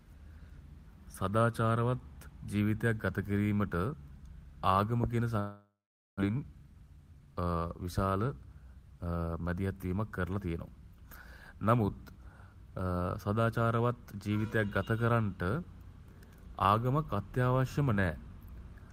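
Speech, with a gap near 5.4 s followed by a hurried passage. From 5.39 s to 6.22 s the sound breaks off in a long network dropout, likely from packets that never arrived in time. The receiver extends the last sound as a fading buzz or hiss before settling into about 480 ms of silence, and roughly 600 ms of the original audio is simply never heard when playback resumes. In all, about 0.8 s of the timeline is filled by the receiver rather than real audio. The recovery leaves the jitter buffer holding about a fifth of a second more than it wants. From 6.29 s to 7.56 s a jitter buffer speed-up drains that excess by repeatedly cutting out short stretches of one or a few pitch periods. The speech plays at about 114% speed with unchanged pitch and sounds rushed as roughly 200 ms of material is trimmed away.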